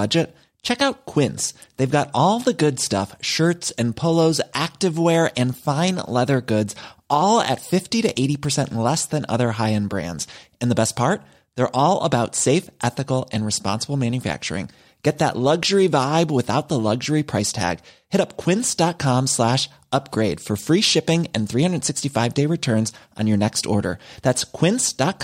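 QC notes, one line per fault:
No fault to note.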